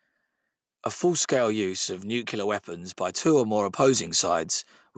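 Just after "of nuclear weapons by", at 3.22 s, the automatic gain starts rising. The gain control judged the input too quiet and pushed its level up slowly. The boost climbs by about 4 dB and settles at 4.18 s. The speech and the background noise behind it swell together, so the background grows along with the voice. Throughout, nothing is heard above 8 kHz, which fits a wideband call codec.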